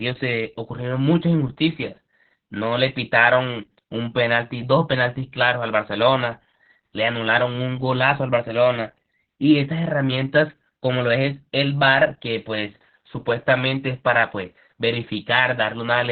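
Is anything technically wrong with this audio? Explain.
Yes. Opus voice compression affects the whole clip. The speech has been run through the codec's linear-prediction path, which models the voice as a filter driven by a coarsely coded excitation, in narrowband mode. Nothing remains above 4.5 kHz, so consonants lose their crispness and the voice sounds muffled and boxed-in. The heavy damage, consistent with a very low bitrate of around 8 kbps, leaves the voice hoarse, buzzy and slightly robotic.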